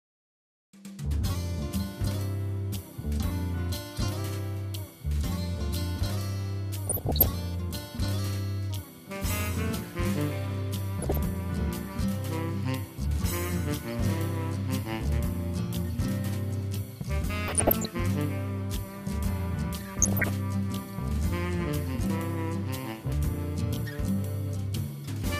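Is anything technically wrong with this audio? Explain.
Yes, there is DAB burbling from 6.86 to 7.26 s, 11.02 to 11.17 s, 17.43 to 17.86 s and 19.95 to 20.29 s. Bit errors of under one percent slip past error correction into the MP2 data, putting short blips of noise into single sub-bands over the sound.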